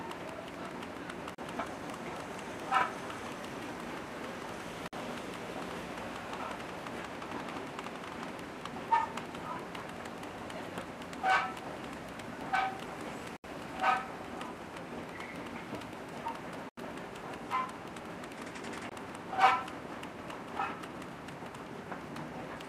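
Five short gaps of complete silence break the sound at 1.35 s (36 ms), 4.88 s (50 ms), 13.37 s (75 ms), 16.69 s (84 ms) and 18.89 s (22 ms). These are likely Bluetooth stalls: delayed packets let the receiver's buffer empty, so playback halts until data arrives again. Unlike a click or a concealed packet loss, each gap is a true dead stop with no smeared or repeated fragment, and the lengths vary irregularly.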